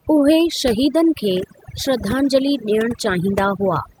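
Overdone noise removal runs throughout the speech. The suppressor was set too hard, so bands near its noise estimate get pulled down or cut entirely. Quiet voice detail goes too. The background drops and breaks up into twinkling specks.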